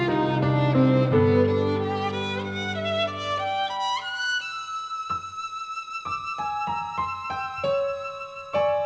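Nothing is technically wrong with this audio, which comes through a WebRTC call path using the G.722 codec at 64 kbps, so it has nothing above 8 kHz.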